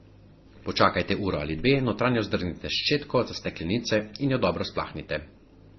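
From start to finish the speech sounds dull and smeared, with nothing above about 6.1 kHz and two kinds of coding grit at once. The likely cause is transcoding between lossy codecs. The character fits a low-rate MP3, around 24 kbit/s, re-encoded to Opus near 32 kbit/s. The second encoder wasted bits on the first one's artefacts, added its own, and kept the lowest cut-off in the chain.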